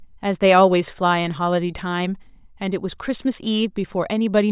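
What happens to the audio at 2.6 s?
Nothing goes wrong at 2.6 s; the speech runs through that moment intact, with no dropout, click or other fault to be heard.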